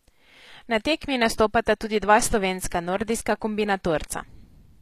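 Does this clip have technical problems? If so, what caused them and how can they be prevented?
Yes. Throughout the speech the top end is bright but gritty and lispy, and nothing sits above 14.9 kHz. That's likely HE-AAC compression: the treble is rebuilt from copied lower bands rather than coded, which fits a low bitrate around 24 kbps. To prevent it, export at a higher bitrate with plain AAC or a lossless format.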